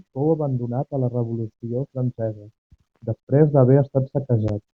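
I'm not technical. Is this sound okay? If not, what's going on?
Yes, nothing wrong can be heard in this recording.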